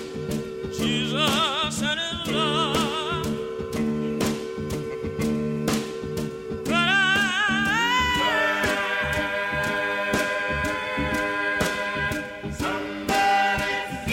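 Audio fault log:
No fault to log.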